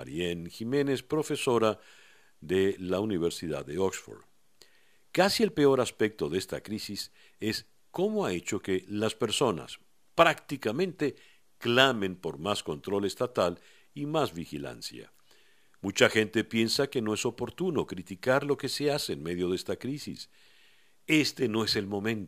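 A fine hiss and grittiness rides on the speech from start to finish, thickening on louder passages and on sharp, bright consonants and falling away completely in the pauses. This is sample clock jitter. The converter's timing wanders by a few microseconds, so each sample lands slightly off its proper instant, and the resulting error scales with how fast the waveform is moving. Here that noise sits roughly 30 dB below the signal.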